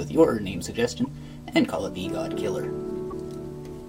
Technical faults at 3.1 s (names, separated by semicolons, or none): broken MP3 bit reservoir